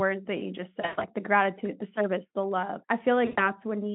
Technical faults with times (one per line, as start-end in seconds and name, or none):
0.81-1.05 VoIP packet loss concealed by the speech codec
3.26-3.50 VoIP packet loss concealed by the speech codec